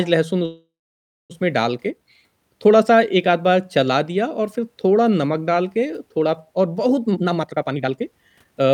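From 0.45 to 1.32 s the speech stops, a brief buzz or hiss fading into about 0.6 s of silence, then resumes intact: a call audio freeze, likely delayed packets draining the jitter buffer. From 7.04 to 8.68 s speech sounds hurried at unchanged pitch, running at 147% speed: a jitter buffer speed-up trimming pitch periods, roughly 0.7 s in total.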